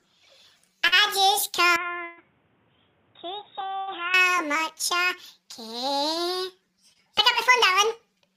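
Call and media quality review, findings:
Short concealed packet loss, 0.87 to 0.94 s: brief smear, about 43 ms of concealment standing in for 40 ms of lost audio. Jitter buffer / decoder PLC extends the last sound, then crossfades back. Spectrogram: smoothed, repeated texture, blurred onsets.
Short concealed packet loss, 6.93 to 6.97 s: same mechanism, 22 ms filled for 20 ms missing. Waveform: short stretch of repeated periods or noise-like fill, no gap.

Input switched to a poorer device, 1.76 to 4.14 s: audio turns duller and boxier, level down about 10 dB, new background noise about 35 dB below the signal, no silence at the switch. Likely a capture change to another microphone or a headset call profile. Spectrogram: hard ceiling at 3.8 kHz for the span, with a raised noise floor. Waveform: lower envelope throughout.

Burst of packet loss, 2.04 to 2.19 s, inside the switched span: 132 ms of concealment replacing 140 ms of lost audio, no silent stretch. 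Receiver PLC holds the last sound and attenuates it, giving a held buzz or a fading hiss, then resumes further on. Spectrogram: frozen, decaying band structure.
Burst of packet loss, 3.79 to 3.89 s: 80 ms filled, 80 ms missing. Same held, fading fill, with a jump in content at resumption. Waveform: tapering repetitive segment.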